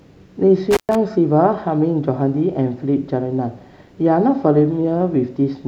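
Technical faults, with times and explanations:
0.71–0.95 s: intermittent contact. The speech cuts out for 119 ms with crackle at both edges as a loose connection briefly opens the signal path.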